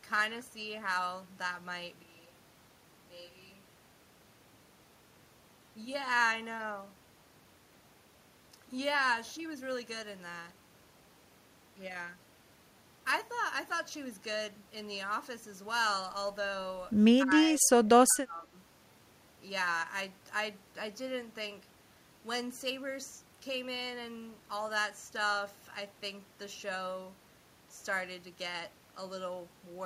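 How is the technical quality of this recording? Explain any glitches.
Two problems stand out: a brief stretch where the speech comes from the wrong microphone, and a cluster of dropouts shortly after 17 seconds.

From 2.04 to 5.03 s there is a likely switch to a distant microphone. The close pickup appears to drop out, and a microphone farther away carries the speech instead. The speech suddenly sounds hollow and roomy, thinner in the low end, and about 10 dB quieter. Room noise sits roughly 35 dB below the speech. The close sound returns just as abruptly at 5.03 s.

Between 17.24 and 18.55 s the speech is most likely suppressed in double talk. With both ends talking at once, the echo canceller cannot separate the local talker from the loudspeaker's echo, so it turns the local speech down. The speech dips three times, each dip deeper than the last: about 10 dB at 17.24 to 17.36 s, about 20 dB at 17.58 to 17.88 s, and about 25 dB at 18.07 to 18.55 s.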